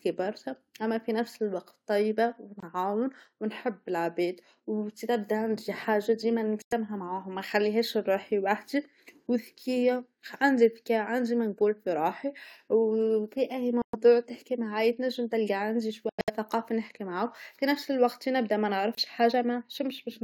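The speech cuts to silence at 2.60, 6.62, 13.82, 16.09 to 16.30 (broken gaps) and 18.95 s. Each is a Bluetooth dropout: late packets were likely discarded, leaving holes of 23 to 163 ms.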